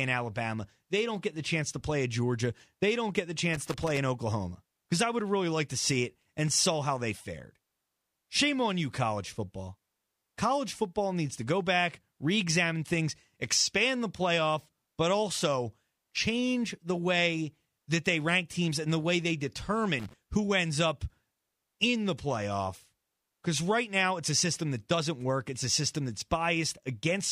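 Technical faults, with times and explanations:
3.54–3.98 s and 19.99–20.13 s: loose connector crackle, a worn contact breaking intermittently, chopping the speech into irregular scratchy bursts, seen as ragged waveform dropouts with broadband vertical streaks.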